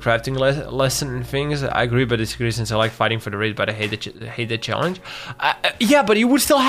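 Nothing is technically wrong with this audio, and no faults can be heard anywhere in it.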